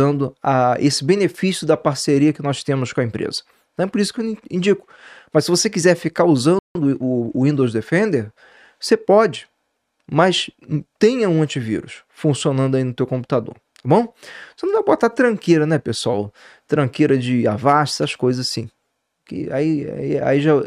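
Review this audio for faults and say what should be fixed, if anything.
A playback stall silences the audio from 6.59 to 6.75 s, about 160 ms, and then it resumes. The likely cause is the player running short of buffered data or its output thread being blocked.

A time-compressed catch-up follows from 6.75 to 7.39 s, with the audio hurried to 1.25 times normal speed. The player is shortening its backlog by removing small slices and cross-fading over the joins. Because the pitch stays normal, this is not a simple speed-up or resampling error.

To prevent both, give the player a deeper buffer and keep its audio thread free of blocking work, so it never starves and has no backlog to compress away.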